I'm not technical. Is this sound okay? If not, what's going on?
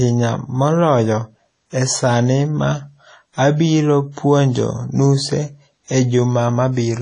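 No. WMA compression is the likely cause of damage that runs through the whole speech clip. To save space, the audio was squeezed, throwing away fine detail and everything above 10 kHz. That leaves the voice dull, ringing and washy, with a hiss that swells along with it.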